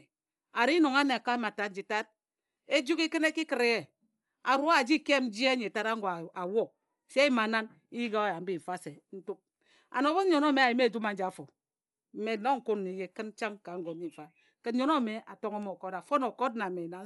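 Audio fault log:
throughout: Dolby Digital compression. The speech sounds dull and muffled, with nothing above 11.5 kHz, and a rough, fluttering noise sits around the voiced tones. The damage is plainly audible across the whole clip. The cause is likely a bit-starved Dolby Digital encode, consistent with a 64 kbps stream. To save bits, the encoder cut off the top of the band and left many frequency lines without detail. The decoder then filled those gaps with noise, which produces the grainy flutter.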